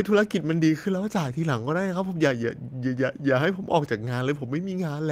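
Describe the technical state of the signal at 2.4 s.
At 2.4 s the speech signal is intact, with no dropout, clipping, glitch or other technical fault at that point.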